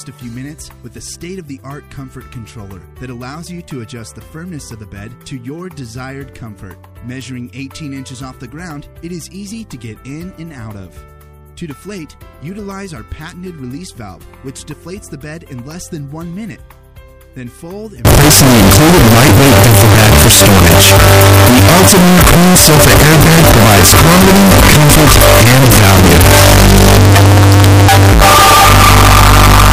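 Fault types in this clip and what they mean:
Signed and unsigned mixed up: from 18.05 s to the end, the sound turns into a very loud, harsh distortion in which quiet passages come out as loud as the rest. The likely cause is samples, probably 16-bit, being read with the wrong signedness, so the top bit flips and every zero crossing becomes a jump across the full range. That turns small waveform movements into huge swings and buries the original dynamics under harsh distortion.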